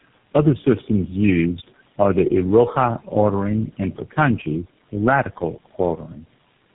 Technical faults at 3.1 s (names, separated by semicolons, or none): tandem speech coding